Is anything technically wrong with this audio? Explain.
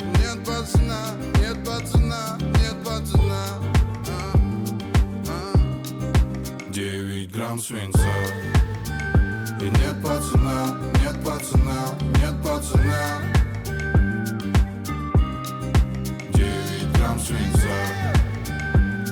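No, no technical faults here.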